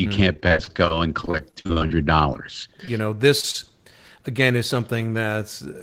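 From about 0.33 s to 3.56 s the speech breaks up with repeated packet loss, which gives it that robotic sound. Across those three seconds or so there are 22 separate dropouts. Each one gets papered over by stretching the last bit of sound, adding up to roughly 480 ms of filler, and about 360 ms of sound is lost outright. The holes are short, 39 ms at most, but they come so close together that the voice turns choppy and robotic.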